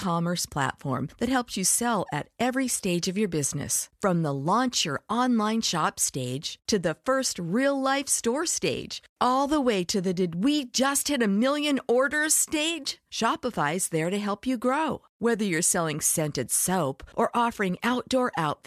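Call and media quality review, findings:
No faults heard in the speech recording. Nothing here needs a ticket.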